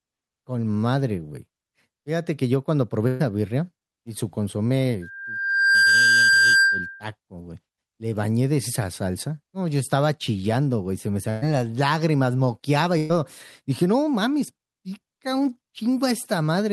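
A burst of packet loss hits this speech clip at 3.07 to 3.23 s, again at 11.30 to 11.45 s and at 12.98 to 13.12 s. In each case about 120 ms of audio never arrived in time, so the receiver stretched the last sound it had across the gap, fading it into a brief held buzz or hiss, and then jumped ahead with that stretch of speech gone. A loudspeaker feedback squeal runs from 5.02 to 7.10 s. It is a single 1.6 kHz tone that swells over a little under a second until it sits a few decibels above the speech. The microphone was picking up its own loudspeaker, and at that frequency the loop gain exceeded one, so the tone kept reinforcing itself until it was held in check.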